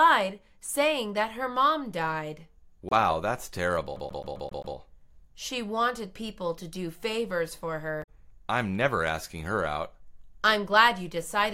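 At 2.89 to 2.93 s there's a quick glitch. That's damaged data in a compressed stream: a bad patch of bytes throws the decoder off, so it garbles those frames and skips forward to the next header it can lock onto. Then from 3.96 to 4.76 s you get the CD stuck on one turn. A scratch keeps kicking the laser back to the same spot, so a 0.13 s slice plays six times with a tiny mute at each jump, the classic fast, even skipping-disc stutter. The corrupted-stream blip comes back at 7.99 to 8.09 s, a bit longer this time, as the decoder resyncs.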